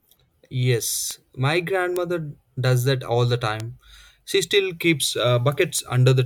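A speech clip with four sharp ticks at 1.11, 1.96, 3.60 and 5.79 s: bit error spikes from flipped bits, reaching about −6 or −12 dBFS, showing as lone waveform needles and thin full-height spectrogram lines.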